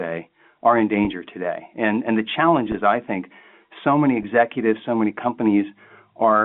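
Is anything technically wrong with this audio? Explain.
Yes, there is packet loss with pitch repetition at 1.05–1.07 s after "are in", at 2.72–2.74 s after "and the challenge", and at 4.23 s after "I think so many". Roughly 20, 20 and 10 ms of audio go missing, and the receiver covers each gap by repeating the last pitch period, which is heard as a brief held buzz over the band-limited G.711 telephone sound.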